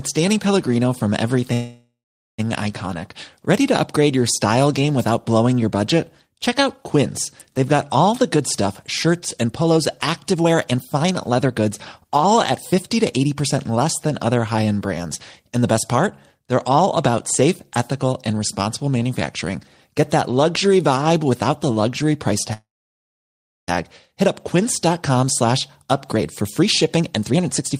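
From 1.53 to 2.40 s a call audio freeze fills about 0.85 s. Packets were likely held up in transit and the jitter buffer ran empty, so the last sound carries on as a fading buzz or hiss, then 440 ms of silence, before the audio resumes where it stopped with nothing missing.

From 8.12 to 9.79 s and again from 10.32 to 13.77 s, a jitter buffer speed-up follows. The buffer held more delay than its target, and the receiver cut short pitch-period slices to work it off, roughly 0.3 s and then 0.5 s. The audio runs 18% and then 16% fast at unchanged pitch and sounds hurried.

A second call audio freeze runs from 22.53 to 23.70 s, again likely caused by delayed packets. It adds about 1.14 s of filler, over a second of it silent.

A final speed-up from 24.59 to 27.74 s runs 12% fast and trims about 0.4 s.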